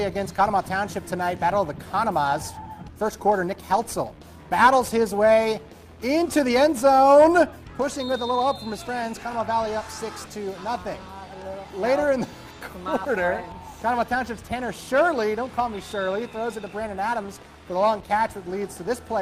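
No technical faults can be heard anywhere in this audio. There is nothing here that needs a timestamp or a repair.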